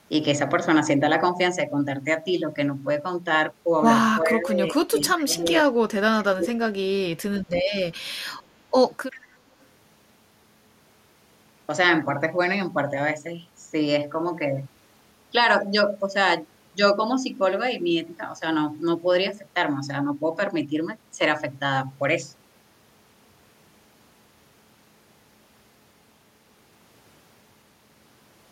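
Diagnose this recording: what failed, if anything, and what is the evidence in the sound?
Call processing: speech suppressed in double talk from 4.22 to 5.53 s and 6.02 to 6.77 s. The level ducks by about 15 dB, then about 30 dB. This is likely the echo canceller attenuating during simultaneous talk. A network dropout would leave abrupt silent gaps instead.

Call processing: echo leak at 5.10 to 5.15 s, 8.39 to 8.43 s and 9.11 to 9.19 s. Each is a faint scrap of the voice repeated 381 ms later, about 20 to 40 dB down. The likely cause is loudspeaker pickup that the canceller failed to remove. Room reverberation would give a decaying tail, not a fixed delay.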